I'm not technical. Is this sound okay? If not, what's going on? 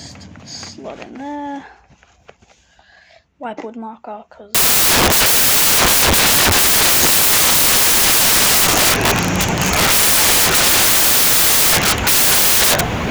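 No. From about 4.55 s to the end, the sound turns into loud hiss because of samples built from the wrong bytes: the player pieces each sample together incorrectly, so tiny details become huge. Unlike background hiss, it is loud and harsh.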